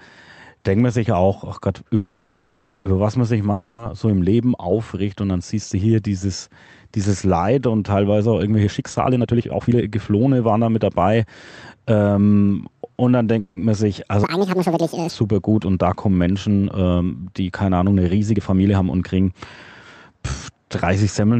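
At 1.95 s the speech stretches into a fading buzz until 2.87 s, then resumes where it stopped. It is likely a call audio freeze, where delayed packets emptied the jitter buffer and about 0.9 s of gap was inserted. At 3.52 s a shorter fading fill runs to 3.80 s, and the speech returns with that 0.26 s missing, consistent with a long network dropout. From 8.60 to 10.91 s the speech hurries along at 139% speed with unchanged pitch, as a jitter buffer speed-up trims short pitch-period pieces, roughly a second in total, to shed excess delay. A brief freeze returns between 13.40 and 13.59 s, adding about 0.17 s of fill. From 14.24 to 15.09 s the speech jumps high and rushed, played 1.77 times too fast and roughly ten semitones up, a section at the wrong speed. Finally, 18.34 to 19.41 s is quickened again to 116%, dropping around 0.2 s. Throughout, the band-limited Opus call coding stops near 8 kHz.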